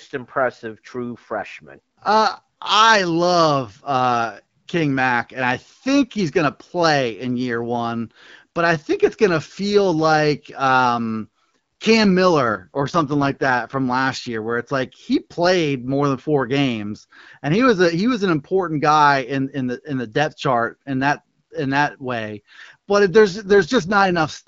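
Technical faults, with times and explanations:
12.41–13.80 s and 23.27–24.47 s, AMR rate drop: twice the speech turns rougher, buzzier and more synthetic, the second time running to the end of the clip. The band stays the same and there is no gap; the wideband codec simply spends far fewer bits on the vocal tract model, which fits a step from 12.65 down to 6.6 kbit/s. On a spectrogram the upper band keeps its height but harmonics smear into noisy, blocky texture. The waveform envelope stays continuous.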